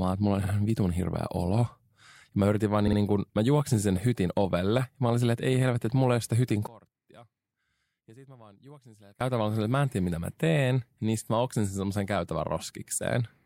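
Speech with two brief stutters, where a fragment replays: at 0.43 s, after "että mulla on", a 52 ms block plays once more, and at 2.86 to 2.97 s, after "mä yritin vaan", the same length repeats twice, adding about 0.1 s. These are repeated frames; the block length fits two compressed frames written again. From 6.67 to 9.21 s, between "ei ole sitä hytin" and "silleen että mä en", the voice drops by about 25 dB to a faint residue on mono playback, likely from one channel inverted, so the centred voice cancels.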